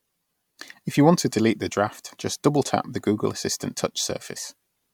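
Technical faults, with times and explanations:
No technical faults can be heard anywhere in it.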